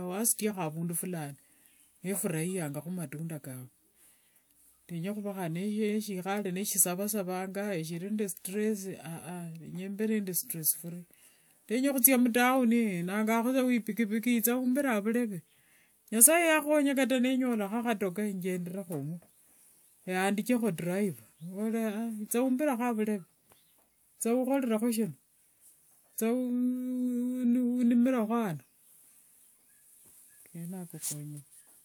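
No technical faults are audible anywhere in the speech recording.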